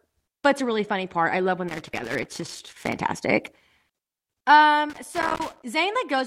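Around 1.68 s the speech breaks into loose connector crackle that runs until about 2.96 s, and it comes back from 4.90 to 5.64 s. What you're hearing is a worn or dirty contact making and breaking as the plug shifts: the signal gets chopped on and off irregularly, and any DC sitting on the line turns each break into a little pop. The result is that ragged, scratchy burst layered over the voice.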